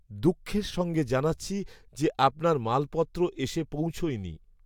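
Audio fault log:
No faults detected in this recording.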